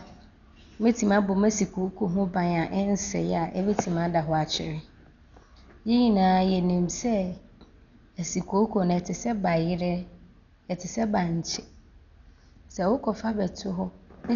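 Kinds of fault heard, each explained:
Dolby Digital compression: Heavy codec damage runs throughout this speech, likely from a low-bitrate AC-3 style encode near 48 kbps. Nothing is heard above about 6.9 kHz, so it sounds dull. Bands starved of bits are filled with noise, leaving a rough, fluttering texture.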